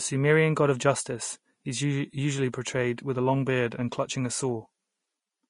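Speech with plainly audible Vorbis compression throughout, likely from a low-quality encode near 33 kbps. Nothing survives above 10.5 kHz, a hard ceiling on a spectrogram. Below it, coarsely quantised treble appears as speckled noise, sounding hissy and grainy with blurred attacks.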